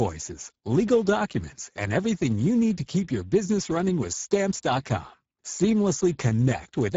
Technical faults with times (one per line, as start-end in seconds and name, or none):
0.00-6.97 Speex codec